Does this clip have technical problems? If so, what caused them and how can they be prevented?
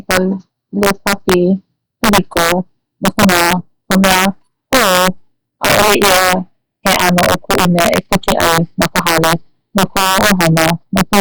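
Yes, there's integer overflow running through the whole speech clip. The signal is pushed about 4 dB past full scale, and instead of being limited, any sample that goes over wraps around to the opposite extreme. So only a small share of samples, a couple of percent, actually cross the line, but each one jumps the full range and lands as a sharp, violent crack on the louder syllables. That's much harsher than ordinary clipping. To prevent it, use saturating arithmetic or a limiter before converting to integer, and leave some gain headroom.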